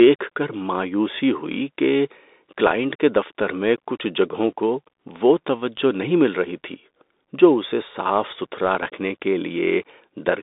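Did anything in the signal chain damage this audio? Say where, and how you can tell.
Yes, at the codec stage: a Bluetooth CVSD headset codec throughout. Nothing passes above about 3.8 kHz, and granular hiss and scratchy s sounds, unlike plain band-limiting, show the one-bit delta step hunting around quiet signal and failing to keep up with loud high sounds.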